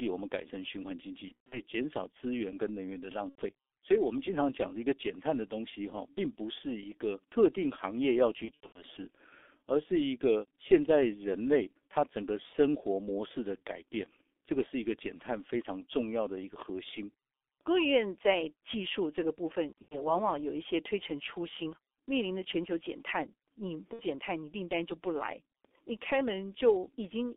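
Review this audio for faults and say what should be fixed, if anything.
The whole clip carries G.723.1 codec damage, and it is heavy. The speech is band-limited to about 300 Hz to 3.6 kHz. It sounds muffled and hoarse, with smeared consonants. The slow voice-model updates fit a low-rate codec near 6 kbit/s. Use a wideband codec such as G.722 or Opus.

VoIP packet loss concealed by the speech codec occurs at 1.28 to 1.60 s, 3.29 to 3.44 s, 8.45 to 8.82 s, 19.82 to 20.15 s and 23.93 to 24.02 s. The decoder stretches its last pitch and filter into a fading buzzy tone or coloured noise. Speech stays weak briefly afterwards. Add jitter buffering and forward error correction.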